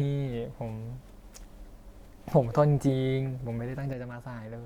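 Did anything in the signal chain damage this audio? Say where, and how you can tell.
Yes. From 3.93 s to the end at 4.66 s, the speech falls abruptly by about 6 dB and stays down. This is one channel dropping out: after the mono sum, only half the shared signal remains. The likely stage is analogue wiring, such as an intermittent connector.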